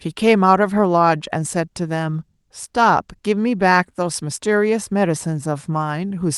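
No technical faults can be heard anywhere in the recording. The speech has passed through a call codec in normal working order, with its high frequencies ending at around 12 kHz.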